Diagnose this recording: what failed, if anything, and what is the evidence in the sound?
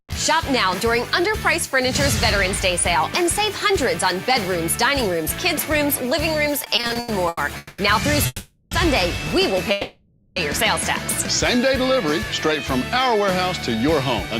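From 6.59 to 7.40 s the sound catches and drags in nine short hitches, the longest about 90 ms, with roughly 300 ms filled and nothing skipped. These are repeated stalls (stutter) at the network and jitter-buffer stage: late packets kept emptying the buffer, and the receiver stretched the last sound each time.

Three longer holds follow: 7.57 to 7.81 s (210 ms), 8.26 to 8.74 s (450 ms, briefly silent), and 9.71 to 10.39 s (650 ms). Each sustains a fading buzz or hiss, then the audio resumes exactly where it stopped. This call audio freeze likely comes from packets held up in the network, draining the jitter buffer.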